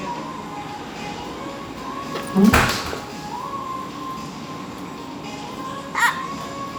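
Nothing in this recording of everyday sounds points to a technical fault at any point in the signal.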